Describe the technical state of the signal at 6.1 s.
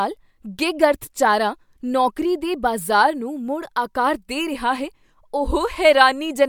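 At 6.1 s the speech signal is intact, with no audible fault at that moment.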